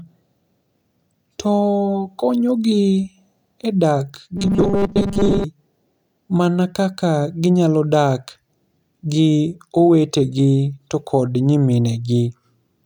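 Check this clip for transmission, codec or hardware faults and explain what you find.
One fault is audible.

From 4.37 to 5.44 s, robotic sound from repeated short buffers turns the speech into a rigid metallic buzz at 200 Hz. Audio likely arrived too late, so a 5 ms chunk was looped while most of the real signal was skipped. Unlike a dropout, sound continues, and unlike pitch shifting, the buzz stays locked at one pitch.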